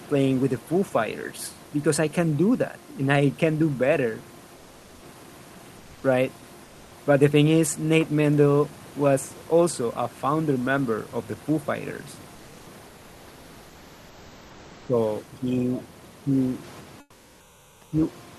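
Between 4.54 and 5.02 s, then 5.77 to 6.03 s and 6.64 to 6.91 s, the pauses lose their natural texture. The room noise, sitting about 34 dB under the speech, is replaced by a smooth, featureless hiss about 1 to 2 dB quieter. This is comfort noise in place of the background, likely from Opus-style discontinuous transmission. The sender stops sending during silence, and the receiver fills the gap with generated noise, 480, 260 and 270 ms long here.

From 14.64 to 14.94 s the talker's level sinks by roughly 15 dB, and from 15.23 to 16.29 s it dips more gently, around 5 dB, for about a second. This is speech suppressed in double talk. Both sides were likely talking at once, and the echo canceller could not separate near speech from loudspeaker echo, so it pulled both down.

At 17.00 to 17.92 s comfort noise returns for 920 ms, this time about 8 dB below the real background, a drop into flat hiss.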